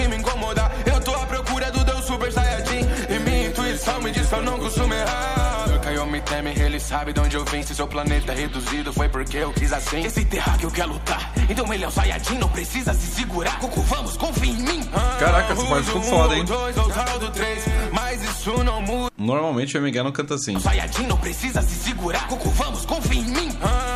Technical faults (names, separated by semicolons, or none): chunks out of order